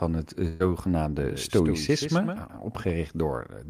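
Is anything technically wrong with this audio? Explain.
Yes, there are two faults.

From 0.47 to 0.62 s there is a burst of packet loss. A short run of audio never arrived in time to be played. The receiver covered the hole by extending the last sound it had and letting it fade, for about 125 ms. When the speech returns, roughly 120 ms of it is gone. You hear a smeared, dying tail, then a jump forward.

From 1.18 to 2.90 s there is a doubled audio track. A second copy of the speech runs about 150 ms behind the first and about 10 dB quieter. It has no reverb or room colour. It is just the same full-band signal, late. The likely cause is a second, slower capture path being mixed in. The copy switches on and off abruptly at those two times.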